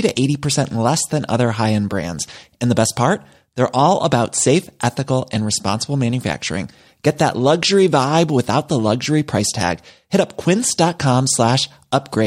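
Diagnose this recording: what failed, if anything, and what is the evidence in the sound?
Nothing failed: no stage from capture to playback leaves audible evidence of a fault anywhere in this speech recording.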